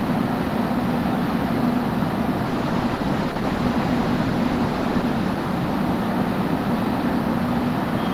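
An everyday sound recording with a call bitrate drop from 2.47 s to 6.36 s. Across that stretch the audio turns coarse and watery, and the top end goes dull. The call's bandwidth estimate fell, so the encoder was told to spend far fewer bits. The sound points to a fall from about 32 kbps to about 13 kbps. It stays at its worst for about 2.6 s before the bitrate recovers.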